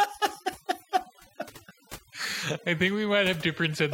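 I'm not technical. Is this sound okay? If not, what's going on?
No. Overdone noise removal runs through the whole clip, from start to finish. A noise-cleaning tool was turned up too far. It treats parts of the sound that resemble background hiss as noise and mutes them, and the softer parts of the speech get caught too. So the gaps between phrases drop to near silence with twinkling, warbling specks.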